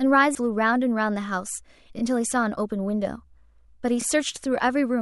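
At 0.35 s, compressed frames are skipped: around ten frames of 92.9 ms each, roughly 0.7 s of speech, vanish, so the audio jumps ahead. Overlapping chunks follow at 1.99 to 2.02 s and 4.02 to 4.04 s, where 2 s blocks each replay 23.22 ms at the join, producing a short stutter.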